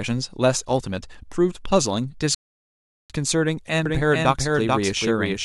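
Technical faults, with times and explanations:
2.35–3.10 s, rebuffering stall: the speech cuts to silence, then resumes exactly where it stopped, with nothing missing. The player ran out of downloaded audio and waited about 750 ms for more to arrive, so that time is simply added.
3.86 s to the end, doubled audio track: a full-band copy of the speech trails the original by roughly 400 ms, about 5 dB quieter, with no decay or room colour, starting abruptly. The likely cause is the signal being captured again through a slower path.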